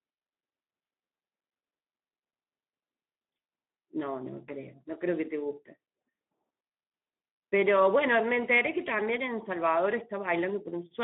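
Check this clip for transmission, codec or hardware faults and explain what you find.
The audio carries one codec fault for its whole length. Speex codec damage runs from start to finish. This CELP speech coder rebuilds the signal from a predicted spectral envelope plus a sparse excitation. The thinness of that excitation points to a low setting of roughly 11 kbps, and it leaves the speech plainly hoarse and grainy. The band sits between about 200 Hz and 3.5 kHz, with nothing above 3.8 kHz, so the speech sounds muffled and telephone-like.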